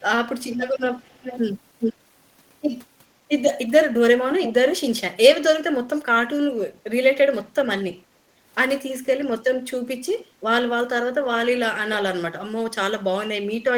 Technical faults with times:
0.00-1.39 echo leak
1.80-1.94 echo leak
4.41-4.53 echo leak
7.52-7.60 background gated by the echo canceller
10.02-10.44 background gated by the echo canceller
10.19-10.24 echo leak

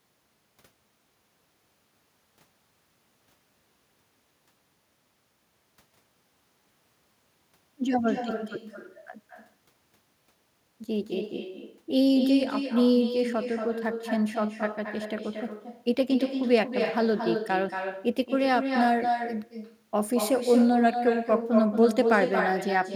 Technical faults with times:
0.00-22.96 echo with no canceller

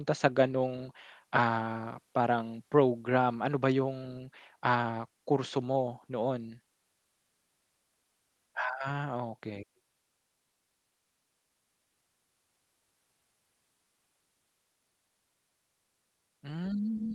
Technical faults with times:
none

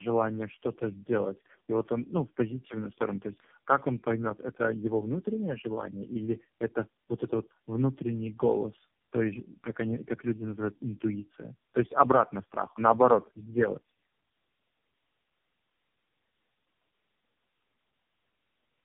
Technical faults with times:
0.00-18.84 tandem speech coding

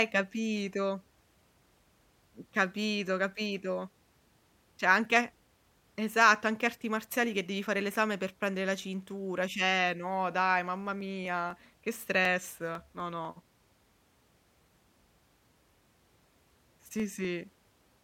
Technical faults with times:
11.01-17.99 periodic USB or driver dropouts

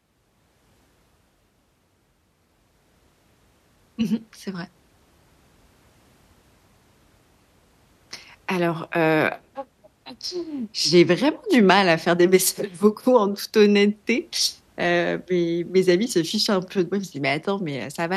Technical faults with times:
none

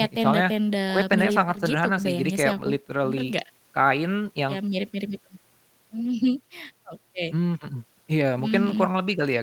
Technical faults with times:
none

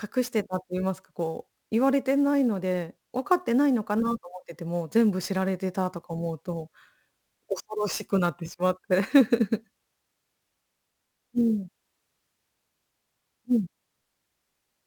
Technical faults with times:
0.00-14.87 sample clock jitter

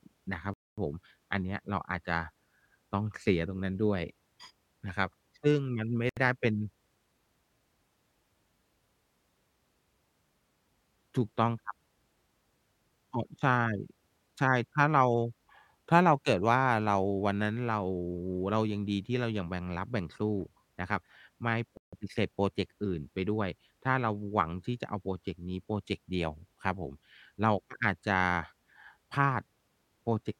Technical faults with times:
0.54-0.78 Bluetooth stall
6.09-6.17 Bluetooth stall
21.77-21.93 Bluetooth stall

